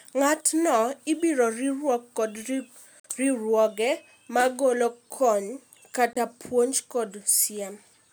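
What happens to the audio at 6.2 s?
Just before 6.2 s, from 6.13 to 6.17 s, the speech drops into a corrupt frame muted gap. Damaged compressed frames were rejected by the decoder and replaced with silence. The sound cuts out abruptly for about 38 ms, which fits a few short frames. Timing stays intact.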